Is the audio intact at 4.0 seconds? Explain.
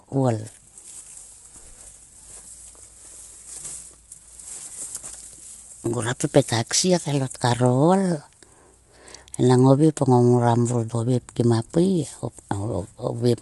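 No. At 4.0 s, as across the whole clip, the speech sounds rough and grainy, with noise filling the gaps between harmonics and nothing above 11.6 kHz. This is likely low-delay AAC compression (AAC-ELD), whose short frames resolve pitch poorly, consistent with a bitrate around 32 kbps.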